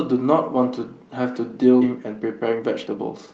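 A skip ahead at 1.81 to 1.83 s makes the speech lurch forward. Roughly 0.7 s of audio was thrown away, most likely because the jitter buffer overflowed while later packets were already queued, and nothing fills the gap. The two sides are spliced almost directly, so the listener hears a sudden jump in the middle of the flow, with part of what was said simply missing and the delay shortened by about the same amount.

Jitter buffer speed-up follows from 1.91 s to the end. The buffer still held more audio than its target, so the receiver cut out short pieces of one or a few pitch periods repeatedly to catch up, removing about 0.3 s in total. The speech plays at 120% speed while the pitch stays the same, so it sounds hurried. Through all of this, the call codec's narrowed top end, which fits Opus at about 32 kbps with an 8 kHz bandwidth, stays in place.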